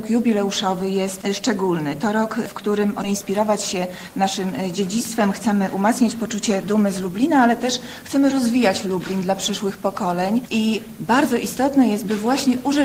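Right at 3.03 to 3.05 s there's a skip ahead: roughly 0.7 s of audio was thrown away, either lost in transit or dumped when the jitter buffer overflowed, so playback jumps straight to later material with essentially no gap filling the join. Just after that, from 3.23 to 5.28 s, you get a jitter buffer speed-up. The buffer was still holding more than it wanted, so it trimmed short pitch-period slices repeatedly, running the sound at 105% speed without shifting pitch and shaving off about a tenth of a second.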